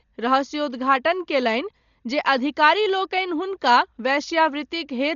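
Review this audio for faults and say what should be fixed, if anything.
The speech sounds dull for its whole length, with nothing above about 6.9 kHz and a rough, fluttering noise clinging to the voiced parts. That points to heavy Dolby Digital compression as the likely cause, and the damage fits a bitrate of around 40 kbps. At that rate the encoder narrows the band and starves many frequency lines of detail, so the decoder fills them with noise. To prevent it, encode from the original source at a much higher bitrate, or keep a lossless master.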